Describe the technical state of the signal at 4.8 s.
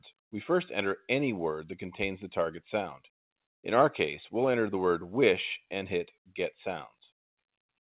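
At 4.8 s the audio is intact, with nothing above about 4 kHz, as expected from the narrowband telephone-style call path it passed through, and no fault present at that moment.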